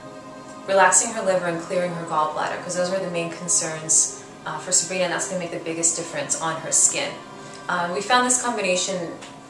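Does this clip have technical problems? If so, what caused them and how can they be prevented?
No, the signal shows no technical faults, so nothing in it needs a cause traced or a fix.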